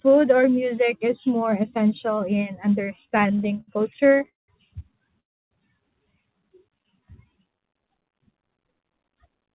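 From 2.96 to 4.50 s, just after "is more essential in", repeated stalls (stutter) break the speech into 22 held fragments, the longest 192 ms, as late packets left the jitter buffer empty. At 5.20 to 5.53 s a call audio freeze inserts 310 ms of silence, likely a held-up packet burst that raised the delay by that amount. From 6.66 to 8.54 s a jitter buffer slow-down repeats pitch periods, adding 242 ms and stretching the speech to 87 % speed at unchanged pitch. Throughout, the narrowband call codec leaves nothing above 4 kHz.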